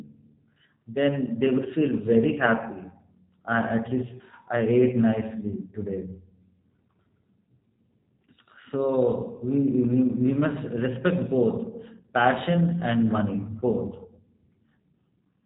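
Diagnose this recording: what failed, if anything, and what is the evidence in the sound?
At the codec stage, G.729 coding is plainly audible throughout the speech, which fits an 8 kbit/s VoIP link. A spectrogram is empty above 3.8 kHz. The voice sounds rough and synthetic because it is rebuilt from a vocal tract model, pitch prediction and sparse pulses.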